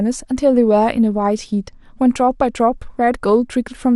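A speech clip with MP2 compression throughout: it sounds dull and gurgly, upper bands flickering out, likely from encoding at a low bitrate, around 80 kbps.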